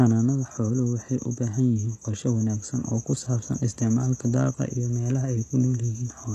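From start to finish, the speech carries damage that points to HE-AAC compression at a very low bitrate, something like 16 kbps. Above the crossover the treble is present but rebuilt by spectral band replication, copied up from lower bands, so s sounds come out gritty and lispy rather than dull, and nothing sits above about 12.3 kHz. That synthetic, misaligned brightness, not missing treble, separates it from a simple low-pass or ordinary AAC. HE-AAC is the likely cause.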